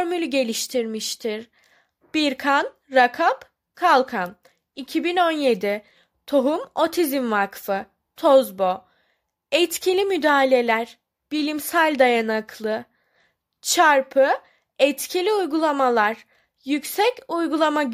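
No technical faults are audible anywhere in the recording.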